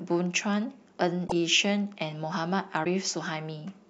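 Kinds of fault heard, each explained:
Broken MP3 bit reservoir: the speech briefly skips ahead with a garbled break at 1.27 to 1.32 s and again at 2.84 to 2.87 s, each about one or two 26 ms frames long, likely because cut frames left the next ones reading another frame's borrowed data.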